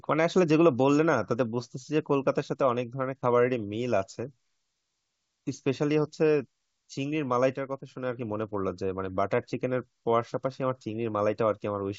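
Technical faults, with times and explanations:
No technical faults can be heard, so there are no times or explanations to give.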